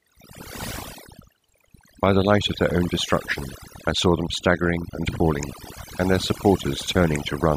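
All the way through, the speech has overdone noise removal: the reducer is gating out quiet bands near the noise floor, leaving twinkly near-silence between phrases.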